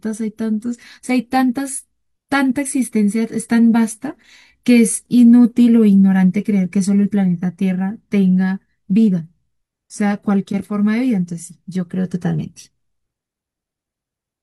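Speech, with no audible faults.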